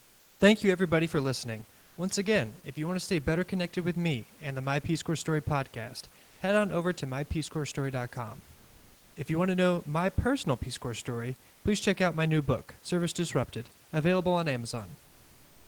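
Discontinuous transmission, likely Opus DTX, dropped the pauses and the receiver substituted comfort noise in place of the background at 6.25–6.39 s before "head on over to", 8.55–9.15 s, 11.53–11.63 s before "please check out my", and from 15.05 s after "available on" to the end. The room noise turns flat and featureless, shifting by up to about 2 dB.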